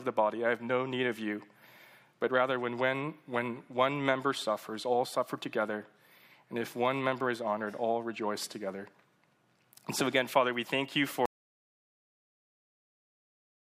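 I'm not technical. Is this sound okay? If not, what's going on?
No. There's an audio dropout to silence from 11.26 s to the very end. The sound cuts off abruptly and turns to total silence, not even background hiss. The input was likely lost, for example a device disconnecting, while recording carried on, so that last part is gone.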